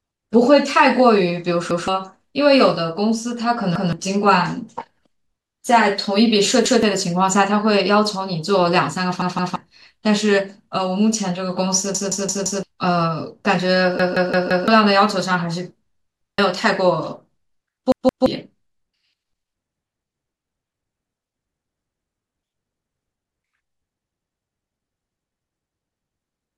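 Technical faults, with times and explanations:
1.71 to 18.26 s, repeated buffer. The speech stutters at 1.71, 3.76, 6.66, 9.22, 11.95, 14.00, 16.21 and 17.92 s. Each time, a piece about 171 ms long plays again with a hard join. The lengths fit an 8192-sample buffer. New audio was late, so the same block was played again. It repeats once at four points, twice at 9.22 and 17.92 s, and four times at 11.95 and 14.00 s. Up to about 0.7 s of speech is lost.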